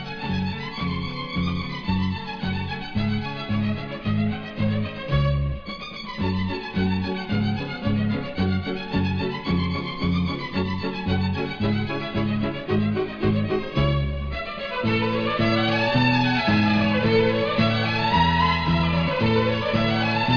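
No technical faults can be heard anywhere in the audio, and the signal holds steady throughout.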